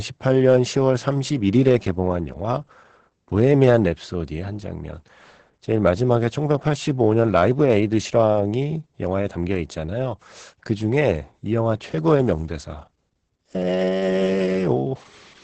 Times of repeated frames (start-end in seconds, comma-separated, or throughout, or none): none